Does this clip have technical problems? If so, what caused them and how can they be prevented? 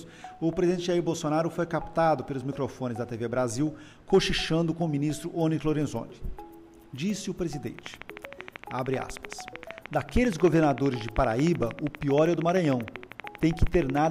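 Yes: a regular train of clicks runs from 7.79 s to 14.06 s, about seventy similar pops at 12.9 per second, peaking about 10 dB above the sound. The even spacing, unlike random crackle, likely points to electrical interference or a faulty connection or power supply. Shielding cables and keeping gear away from noisy equipment prevents it.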